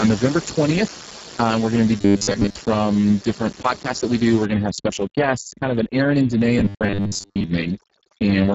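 From the very start the speech runs through the Speex codec at a heavily degraded setting. The coarse excitation makes everything hoarse and noisy, and the sound points to a very low bitrate, somewhere around 6 kbps. The content above 4 kHz is just shaped hiss rather than real detail.

Right after "we're going to be", from 1.98 to 2.57 s, the speech turns into a rigid metallic buzz at 100 Hz until "from different podcasts that" picks up. That's the robotic sound from repeated short buffers. The likely cause is audio arriving too late, with the last 10 ms or so looped to fill the gaps, so most of that stretch is repeats.

At 4.46 s overdone noise removal kicks in and stays until the end. The room noise, which sat about 17 dB under the speech, gets pulled down and broken up into little twinkling specks.

Inside that same stretch, from 6.59 to 7.44 s, the buffer-repeat buzz comes back at 100 Hz. 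It's the same locked, metallic drone as before, with most of the audio in that window replaced by repeats.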